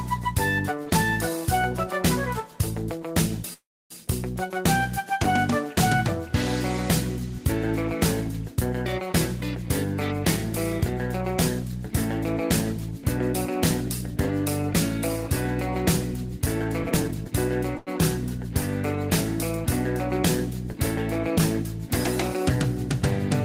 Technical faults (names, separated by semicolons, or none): call audio freeze; jitter buffer speed-up; short stall from a late packet